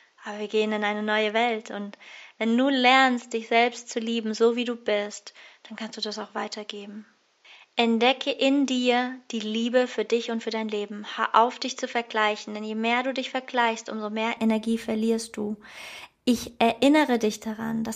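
From 0.0 to 14.37 s the speech is dull and band-limited, with nothing above 7.6 kHz, about 5 dB quieter, and carries a faint new noise floor well below it. This is likely an input switched to a poorer device, which recovers at 14.37 s with no gap.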